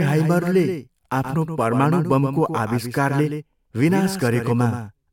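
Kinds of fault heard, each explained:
Doubled audio track: a second, full-band copy of the speech runs through the whole clip, trailing the original by around 150 ms and sitting roughly 10 dB lower. The copy has no decay tail or room colouring, so it sounds like a flat, slap-like repeat rather than reverberation. The fixed offset most likely comes from the signal being captured a second time through a slower path, or from two misaligned copies left in an edit.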